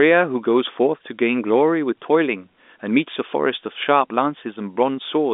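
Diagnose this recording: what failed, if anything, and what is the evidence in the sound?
Nothing stood out on listening; the speech sits within a narrow telephone band with nothing above about 3.8 kHz, as expected from G.711 coding.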